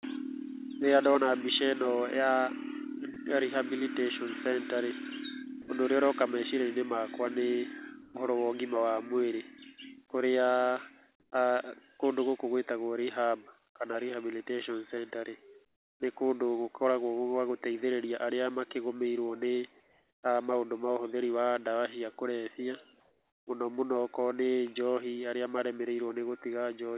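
At 3.14 s a tiny slice of the speech, about 20 ms, just vanishes into a flat hiss, and at 5.62 to 5.68 s it happens again for about 60 ms. That's sound dropped by the voice detector. The sender most likely judged those quiet bits to be background and stopped transmitting, so the receiver filled the gaps with comfort noise. You hear a brief featureless patch before the speech picks back up.

The pauses then get comfort noise in place of the background five times: 8.02 to 8.14 s, 11.2 to 11.32 s, 15.66 to 16.0 s, 19.8 to 20.22 s and 23.0 to 23.46 s. Between phrases the sender likely went into discontinuous transmission, and the far end synthesised a rough stand-in for the room. The real background loses its texture and turns into a smooth, even hiss. The level shifts with it, about 1 dB and 5 dB up in the first two and about 12 dB down at 15.66 s. Throughout, nothing comes through above 4 kHz, which fits narrowband G.711 telephone coding on the call path.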